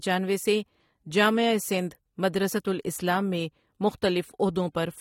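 The whole speech clip carries audible damage from lossy coding, likely AAC compression. Nothing sounds above about 16.6 kHz, so the top of the spectrum is cut away. The coder has too few bits for every band. It drops some and quantises others coarsely. Sibilants turn fizzy and smeared. Sustained sounds warble. The overall tone is dull. The degree of damage fits a low bitrate, around 32 kbps for AAC-LC.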